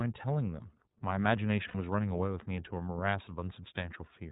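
Throughout, the speech sounds band-limited, slightly rough and synthetic, with nothing above 4 kHz. That is the iLBC codec, which fits 30 ms frames at about 13.3 kbps. From 1.68 to 1.74 s a brief held, buzzy vowel replaces the speech before it snaps back cleanly. These are lost iLBC frames: the decoder repeated the last pitch cycle with noise across 60 ms, which fits two missing 30 ms frames.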